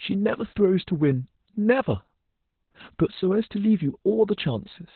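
From start to finish the speech carries heavy Opus voice compression damage. The codec is in its SILK linear-prediction mode at narrowband, so nothing above about 4.2 kHz survives, and the excitation is coded coarsely. That pairing points to a bitrate around 8 kbps. The result is muffled, telephone-like speech with a hoarse, buzzy texture and a slightly robotic quality where the coarse excitation fails to follow the voice's natural detail.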